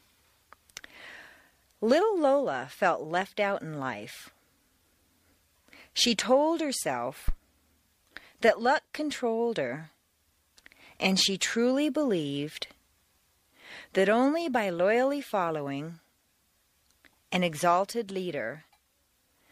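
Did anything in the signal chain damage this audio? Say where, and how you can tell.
Yes. A phantom power thump sits at 7.28 to 7.34 s, in the analogue input stage ahead of the converter. It is a single deep, low-frequency thud peaking at about -14 dBFS and dying away within roughly 13 ms. That shape points to a DC step: phantom or another supply was switched on or off on the live input, and the coupling capacitors passed the sudden voltage change through as a brief transient.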